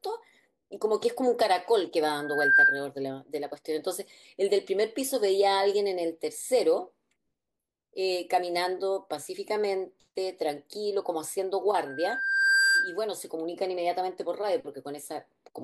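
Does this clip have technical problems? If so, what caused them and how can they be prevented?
Yes. A 1.6 kHz loudspeaker feedback squeal swells above the speech at 2.17–2.88 s and again at 11.86–12.99 s, where the microphone re-amplifies its own loudspeaker. Lower the gain, reposition the microphone, or notch 1.6 kHz.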